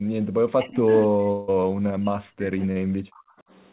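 From 0.00 to 0.28 s, background gated by the echo canceller pulls the room sound down by about 40 dB. The waveform shows a near-flat gap, and the spectrogram shows a dark band.

Between 0.56 and 3.44 s the speech dips deeply, likely speech suppressed in double talk. This appears as reduced energy over about three seconds.

From 1.32 to 1.51 s, a long network dropout is likely. About 160 ms is missing, and a fading buzzy continuation fills it, drawn as smeared, blurred harmonics with no true silence.

At 2.72 to 2.79 s, short concealed packet loss replaces 40 ms with a brief synthetic smear, visible as a short, blurred patch in the spectrogram.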